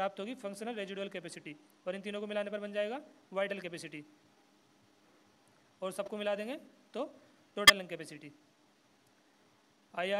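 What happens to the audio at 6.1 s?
A corrupt frame decoded, from 6.06 to 6.08 s: bit errors in about two compressed frames were played anyway, misplacing energy into a brief, quiet chirp, squeak, blip or burst of noise.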